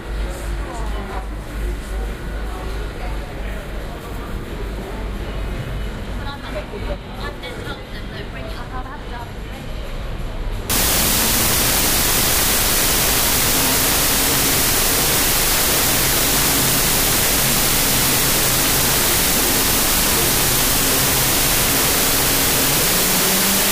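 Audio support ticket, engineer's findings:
Wrong sample width, 10.70 s to end of clip (23.72 s). Symptom: loud noise with the original sound buried underneath, playing at half speed, an octave low. Probable component: decoder or format-parsing stage. Mechanism: bytes regrouped into mismatched values, only some keeping the real signal's top bits, which fits 32-bit float data being read as 16-bit integers.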